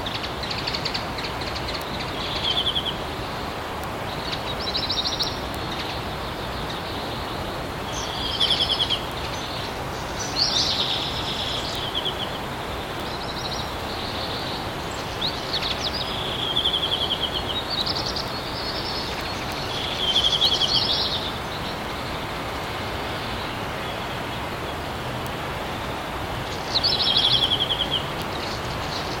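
A steady stream of sharp ticks runs through the sound from 0.11 s to 29.15 s, arriving roughly every 0.15 s, some two hundred in all, and varying in strength from one to the next. These are word clock ticks: the receiving device is clocked independently of the sender, off by something like 150 ppm, so each time the two clocks slip past each other a single sample is dropped or repeated, leaving a click.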